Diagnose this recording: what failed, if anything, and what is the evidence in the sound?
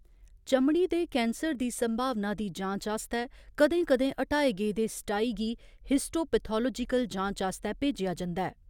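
Nothing failed; no stage leaves any audible trace.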